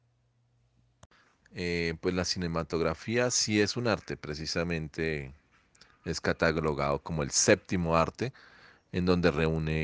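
The sample-rate converter in this speech clip restarts on every 20 ms block, treating each block as if nothing came before or after it. The sound points to a conversion from 24 kHz down to 16 kHz. Each block edge therefore carries a small interpolation error, and at 50 edges per second these merge into a buzz at 50 Hz. The buzz runs throughout but rides only on the voice, dropping away in the gaps between phrases.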